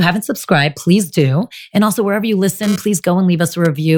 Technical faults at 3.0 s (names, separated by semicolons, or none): GSM phone buzz